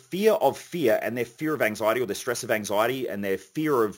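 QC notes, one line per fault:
Throughout, imaging from sample-and-hold upsampling: there's a bright, metallic fizz riding on the speech, sitting about 20 dB below it and tracking its level. It sounds like the audio came up from a 16 kHz rate by just repeating each sample, with no smoothing filter, so a mirrored copy of the spectrum lands between 8 kHz and 16 kHz. That lowest image slides the opposite way whenever the pitch moves.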